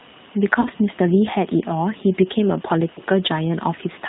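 Speech coded through G.729, which fits an 8 kbit/s stream: rough, synthetic timbre, and a spectrogram showing nothing above 4 kHz, just a flat ceiling. VoIP packet loss concealed by the speech codec occurs at 0.61–0.68 s and 2.95–3.00 s, pointing to about 40 ms and 20 ms of missing audio. The decoder stretches the preceding sound into a fading buzzy tone or coloured noise, seen as a tapering waveform envelope.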